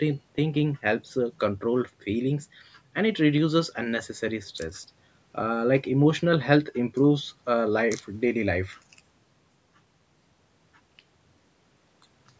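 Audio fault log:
No fault to log; the speech has only the normal call microphone processing, with nothing above 8 kHz.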